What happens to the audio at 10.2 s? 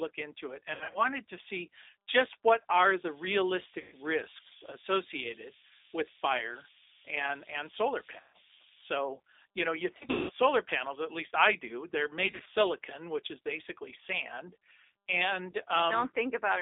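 VoIP packet loss concealed by the speech codec: packets dropped between 9.97 and 10.31 s, with the longest gap 180 ms. The decoder stretched its last pitch and filter at falling gain, so the speech turns into a buzzy tone or a coloured noise that fades, and stays weak until recovery.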